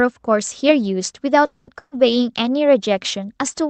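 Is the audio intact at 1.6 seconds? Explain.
No. Between about 1.45 and 1.69 s there is a call audio freeze, likely caused by packets stalling in transit until the jitter buffer ran dry. The receiver bridged the wait by stretching the last received sound into a fading buzz or hiss, covering about 220 ms. When the packets resumed, the audio carried on from where it had stopped, so nothing is lost. Instead, a synthetic filler gap has been inserted, and everything after it arrives 220 ms later.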